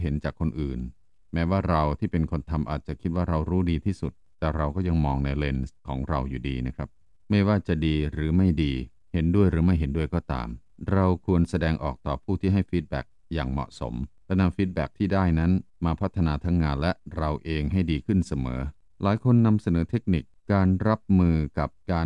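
No technical faults are audible.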